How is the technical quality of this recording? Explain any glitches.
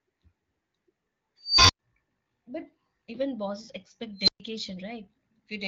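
Two unstable-filter bursts are audible in the speech, heard over light AMR-WB (HD Voice) coding that fits one of its higher rates.

At 1.42 to 1.79 s and 4.18 to 4.40 s, a recursive filter runs away. A squeal around 5 kHz, then around 4 kHz, swells over 276 ms and 96 ms, overflows, and leaves 100 ms and 120 ms of silence.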